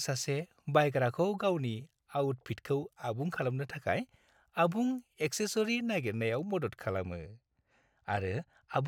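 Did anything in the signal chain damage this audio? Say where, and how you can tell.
Yes. From 6.98 s to the end, the speech turns dull. This is channel delay (comb filtering). One channel arrives a couple of samples late, and the mono sum notches the spectrum from around 10 kHz.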